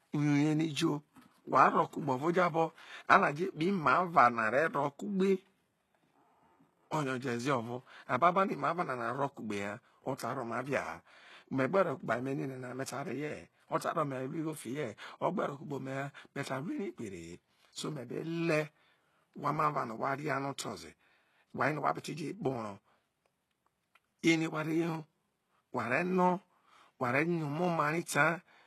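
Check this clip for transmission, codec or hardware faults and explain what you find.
The speech shows codec damage across its whole 29 seconds, most likely from HE-AAC compression, heavy enough to fit a very low bitrate of around 16 kbps. Nothing is present above 12.3 kHz. Below that edge the upper band is rebuilt rather than coded: lower bands are copied upward and given only a rough envelope, so sibilants turn gritty and lispy. Unlike a plain low-pass or band-limited codec, the treble still sounds bright, but its texture doesn't match the voice beneath it.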